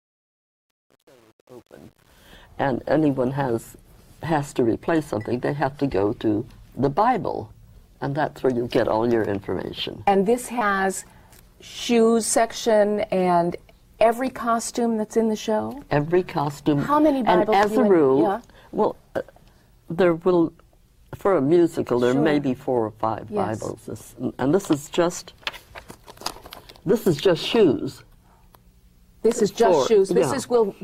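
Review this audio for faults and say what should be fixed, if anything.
Truncation distortion on a fade runs from 0.0 to 2.35 s and is worst up to 2.11 s. The fade stage keeps too few bits, which fits an 8-bit path, and adds no dither, so low levels become coarse steps and sound gritty. Process fades at higher precision and dither when reducing word length.

Short concealed packet loss occurs at 10.59 to 10.63 s and 24.85 to 24.89 s. About 20 ms of audio arrived too late each time, and the decoder extended the preceding sound, filling 12 ms and 20 ms respectively, before rejoining the real signal, leaving a brief smear. A larger jitter buffer or redundancy would prevent it.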